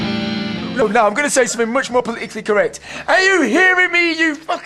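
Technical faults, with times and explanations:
0.82 s, 2.00 s and 3.92 s, compressed frames skipped: whole blocks of the coded stream never reached the output, either missing from the file or rejected by the decoder as damaged, so playback jumps ahead. The first jump loses roughly 70 ms, the other two roughly 30 ms each, which fits about two and then one 32 ms frame.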